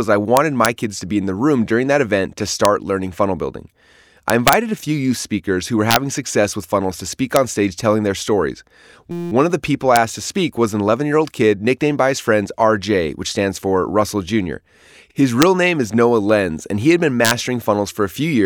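Speech with two kinds of fault. Integer overflow produces sharp, violent cracks at 0.37 to 0.66 s, 2.65 s, 4.30 to 4.53 s, 5.91 to 5.96 s, 7.36 s, 9.96 s, 15.42 s and 17.25 to 17.31 s. At each of these points the signal reached or exceeded full scale by up to about 1 dB. Instead of being held at the limit, the sample values wrapped around to the opposite extreme, so every overshooting peak swings across the entire range. The result is far harsher than ordinary clipping. A system hang loop appears from 9.11 to 9.32 s as a steady buzz at about 172 Hz. A single 5.8 ms slice of audio repeats exactly, some 35 times. This points to the host or driver stalling while the playback hardware kept cycling one ring buffer, which fits a 256-sample buffer. Essentially no audio is lost around the stall.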